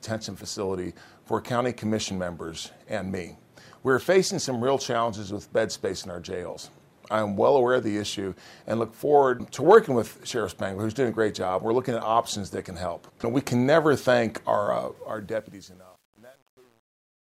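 Truncation distortion on a fade runs from 14.95 s to 17.27 s. The quiet tail turns gritty, worst after 15.26 s. This fits an undithered 9-bit stage.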